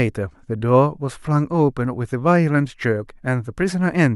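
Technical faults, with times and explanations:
No technical faults are audible anywhere in this speech recording; the signal holds steady and continuous with nothing breaking into it.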